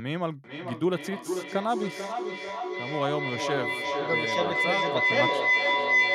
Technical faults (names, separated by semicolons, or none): feedback howl